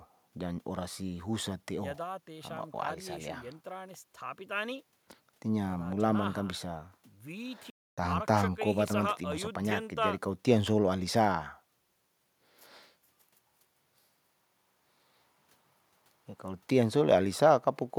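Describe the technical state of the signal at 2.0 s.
At 2.0 s the speech signal is intact, with no dropout, clipping, glitch or other technical fault to be heard.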